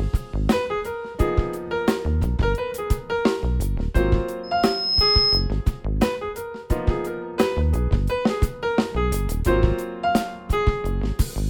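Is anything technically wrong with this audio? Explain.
Yes. From 4.43 to 5.52 s there is loudspeaker feedback squeal. The microphone is picking up its own loudspeaker, and at 5.2 kHz the loop gain exceeds one. A single piercing tone swells over about half a second to roughly 5 dB above the surrounding sound, then stops.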